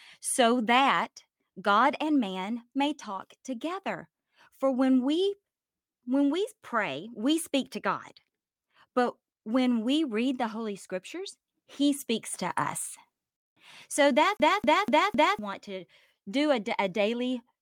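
At 14.37 s the speech locks into a fast, even stutter: the same slice of about 0.25 s plays four times over, each pass cut off by a brief mute, until it breaks free at about 15.39 s. This is a CD stuck on one turn. A scratch on the disc knocks the laser back one track at the same point every revolution, so playback keeps returning to that short stretch of audio instead of moving forward.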